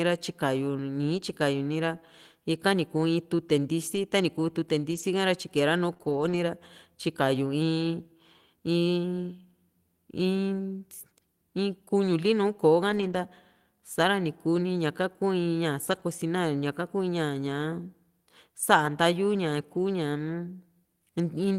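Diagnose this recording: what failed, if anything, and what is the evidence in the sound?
Brief rough, grainy patches run through the speech with no gaps: at 3.95 s, 4.91 to 5.01 s, 6.01 to 6.35 s, 12.89 to 13.15 s, 15.87 to 16.01 s, 18.85 s and 19.77 s. This is lost packets rebuilt from error correction, at the network stage. Packets were dropped in transit, and the packet following each loss carried a low-bitrate duplicate. The decoder played those coarser copies, so continuity holds but the detail turns noisy. The longest patch spans 180 ms of rebuilt audio.

Just before the longest patch, from 5.93 to 5.97 s and again from 5.97 to 6.01 s, the speech briefly smears and wobbles, as if the sound stretches for an instant. This is short concealed packet loss, also at the network stage. About 20 ms of audio failed to arrive in time on each occasion. With no duplicate available, the receiver extended the preceding sound to bridge each hole, then blended back into the real audio.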